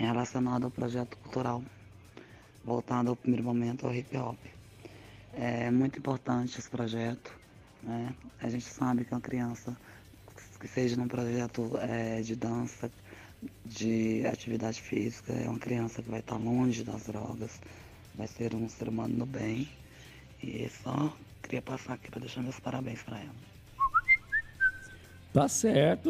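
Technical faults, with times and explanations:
No technical faults can be heard anywhere in the recording. Nothing in the audio calls for a time or an explanation.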